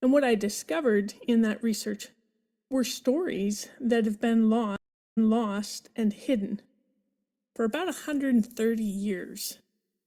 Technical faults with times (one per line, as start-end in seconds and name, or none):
4.76-5.56 stream reconnect
7.71-10.06 pre-emphasis left on